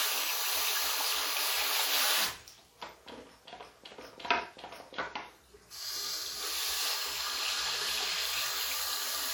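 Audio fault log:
Throughout: WMA compression. The sound carries a ringing, washy smear around its changes, with a hiss that swells and fades along with the signal, and nothing is left above about 19.9 kHz. This is likely a Windows Media Audio encode at a low rate, in line with roughly 48 kbps. Long transform blocks spread quantisation noise over tens of milliseconds on either side of each event, and weak spectral lines are zeroed, which leaves that breathing, smeared texture.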